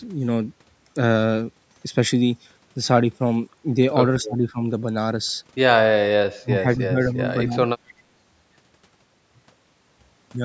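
From 4.22 to 4.61 s, 6.38 to 7.22 s and 7.45 to 7.8 s, the speech sinks abruptly, by about 25 dB, then about 30 dB, then about 25 dB, and comes back in patches rather than smoothly. This is speech suppressed in double talk. The far side was most likely talking over it, and the echo canceller, unable to separate this talker from its own loudspeaker echo, turned the whole signal down.

At 7.88 to 7.94 s a brief, faint repeat slips through, around 30 dB below the speech and trailing it by 255 ms. This is an echo leak. The far end is likely playing the call on a loudspeaker, and its echo canceller let a short piece of what its microphone picked up travel back down the line, where it is heard as a delayed ghost of the sound.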